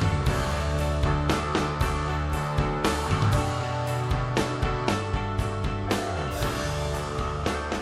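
There are five sharp single clicks, at 0.52, 1.34, 3.25, 4.07 and 6.72 s. Each is a thin vertical line across the spectrum. They're likely dropped samples: a fraction of a millisecond goes missing, and the waveform jumps straight to a later value, far too briefly to lose any actual sound.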